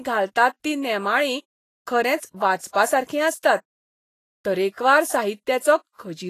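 From start to finish the speech carries a hissy, grainy texture, with nothing above 14.2 kHz and consonant attacks smeared rather than crisp. This is likely Vorbis compression at a low setting, consistent with roughly 26 kbps: the treble is quantised so coarsely that fine detail turns into noise of similar energy, which is why the top sounds hashy rather than dull. A plain low-pass filter would remove the treble cleanly instead, leaving no gritty residue.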